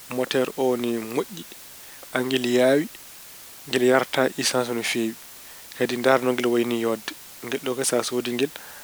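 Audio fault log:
throughout: low bit depth with dither. The speech was stored with very few amplitude steps, consistent with about 7 bits, and dither was added before rounding. The rounding error becomes a constant, even hiss sitting about 20 dB below the speech, with no harsh distortion on the voice.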